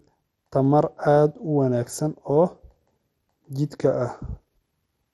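Throughout the speech, the top end stops dead at 12.9 kHz, and the remaining bands sound dull, gurgling and granular as they flicker in and out. The likely cause is MP2 compression, starved of bits in a way that fits roughly 64 kbps.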